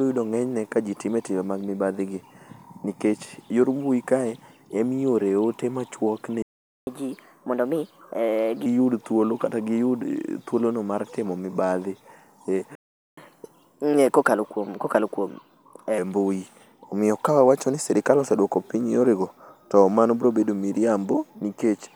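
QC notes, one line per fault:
6.42 to 6.87 s, playback stall: the speech cuts out mid-flow for about 0.45 s of dead silence, then resumes where it stopped. A gap with no lost material points to a player likely starved of data or blocked, not a dropout that skips content.
6.87 to 8.66 s, catch-up at higher speed: straight after the gap the speech runs at 1.25 times normal speed, pitch raised by roughly four semitones, then settles back. Speed and pitch rising together marks resampling to clear a backlog, unlike time-stretching, which keeps pitch.
12.75 to 13.17 s, playback stall: a second silence of about 0.42 s interrupts the speech, which then carries on from the same point. Nothing is skipped, which fits output likely halted while the player waited, rather than a cut edit.
13.17 to 15.98 s, catch-up at higher speed: the speech again hurries, this time at 1.15 times speed and about two semitones sharp, for nearly 3 s before returning to normal. 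The milder, longer rise shows the player recovering the lost time more gently than after the first stall.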